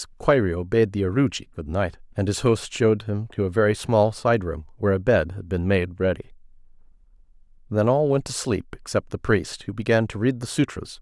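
No technical faults occur at any point in the speech, so there is nothing to describe in time order.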